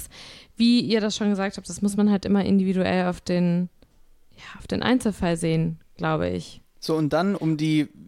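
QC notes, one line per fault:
No technical faults are audible anywhere in the speech signal.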